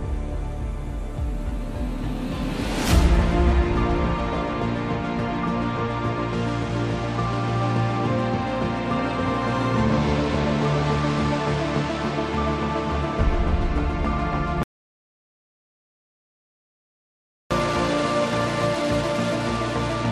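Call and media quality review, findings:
Audio dropout to silence, 14.63–17.51 s: sound cuts to dead silence, no room tone, 2.87 s lost. Likely input lost while encoder kept writing zeros.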